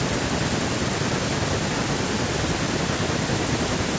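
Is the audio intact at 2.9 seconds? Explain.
Yes, the speech at 2.9 seconds is intact, with no fault at that moment.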